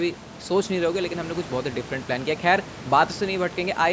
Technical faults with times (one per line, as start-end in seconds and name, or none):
none